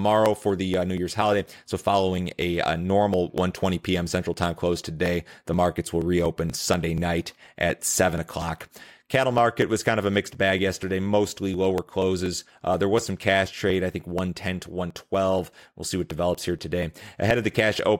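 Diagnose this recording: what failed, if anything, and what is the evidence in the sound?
The driver or buffer stage failed here, with periodic USB or driver dropouts. From 0.26 s to 17.79 s the speech ticks every 0.24 s, roughly seventy times. Each tick is a skip of around 10 ms, as something regularly stalls the bus and that chunk of audio never arrives.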